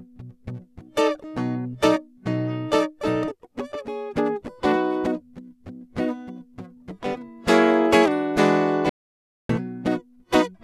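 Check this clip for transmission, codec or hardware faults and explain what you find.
Two faults are audible in the music: a jump in continuity near the start and a stretch of total silence near the end.

At 3.30 s the music lurches forward with a small click. It sounds like a stream segment skipped: a chunk of the stream was likely never fetched, and playback went on with the next one, joining two points of the music that were never adjacent. On a waveform the envelope and phrasing change abruptly at that instant. A spectrogram shows a thin vertical broadband line where the harmonic content breaks off and resumes with different material.

From 8.89 s to 9.49 s, about 0.6 s, the music vanishes completely and then re-enters mid-flow. This is an audio dropout to silence. The input was likely lost for a moment while recording carried on writing silence, so nothing of the ambience or decay remains. 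The waveform collapses to a flat line with hard edges, and the spectrogram shows a solid dark column bounded by sharp vertical onsets.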